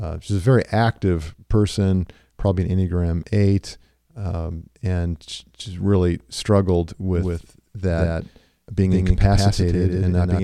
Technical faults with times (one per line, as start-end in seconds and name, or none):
7.15-10.43 doubled audio track